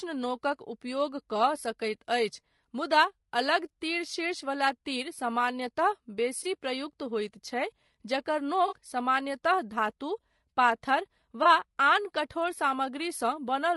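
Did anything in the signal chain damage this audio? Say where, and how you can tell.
Yes. Throughout, the speech sounds rough and grainy, with noise filling the gaps between harmonics and a thin, synthetic-sounding top band. That points to the codec stage, likely low-delay AAC compression (AAC-ELD) at around 32 kbps, whose short frames resolve pitch harmonics poorly.

Three brief smeared, phasey patches at 6.43–6.46 s, 8.67–8.76 s and 11.43–11.46 s are AAC frame loss with concealment, from the network or transport stage. For 20 ms, 40 ms and 20 ms, the decoder rebuilt the missing audio from the last good spectrum.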